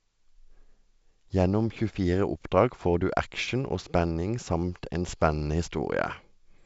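No faults are audible in the speech; the band stops near 7.7 kHz, which fits G.722 wideband telephone coding at its 64 kbit/s mode, with at most a faint trace of coding hiss.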